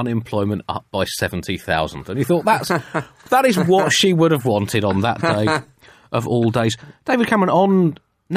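No technical faults can be heard anywhere in the clip.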